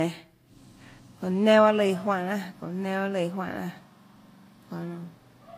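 Speech clip with stacked codec damage all the way through: the artefacts of different codecs heard together, and nothing above 15.2 kHz. That's likely transcoding between lossy codecs, a WMA encode near 96 kbit/s, then Vorbis around 45 kbit/s.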